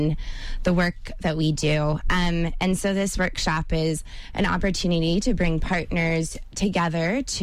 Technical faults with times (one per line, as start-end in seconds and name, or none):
0.11-7.41 clock slip clicks